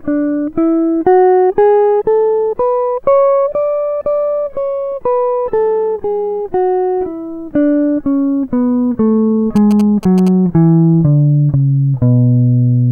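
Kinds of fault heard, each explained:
GSM signalling bursts: a 2G phone close to the playback or recording chain transmitted short clusters of radio bursts while signalling to its network, and the audio circuitry rectified that RF energy into the signal path. In this music clip it breaks in from 9.56 to 10.29 s as a galloping run of ticks and brief buzzes pulsing at about 217 Hz, sitting roughly 15 dB below the music.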